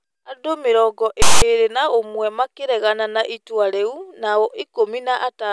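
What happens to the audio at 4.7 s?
Nothing goes wrong at 4.7 s; the speech plays through that moment cleanly, with no dropout, click or distortion.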